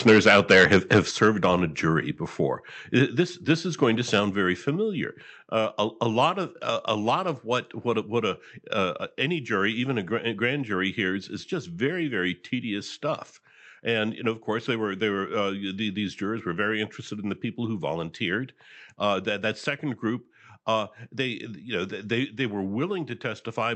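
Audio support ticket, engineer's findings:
Microphone overload, 0.07–1.46 s. Input gain likely set too high; peaks driven about 11 dB past converter full scale, a few percent of samples flattened. Harsh, crackling edge on the loudest syllables throughout the opening.

Microphone overload, 4.14–4.2 s. Same mechanism, milder: likely excess input gain pushing peaks about 3 dB over, roughly one percent of samples clipped. Short burst of grit.

Microphone volume stepped down, 0.12 s. Likely the call software's gain control reacting to the clipping and cutting device input by about 2 dB in one step. Voice and background drop together, abruptly.

Microphone volume stepped down, 1.11 s. Likely a second automatic cut, about 6 dB, while overload continues. Sudden fall in level of voice and room noise.

Microphone volume stepped down, 4.2 s. Likely triggered by the 4.14 s peak; input lowered about 3 dB immediately after the distortion. 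Sudden step down in overall level.

Call path: Opus at 64 kbps, band-limited to about 8 kHz.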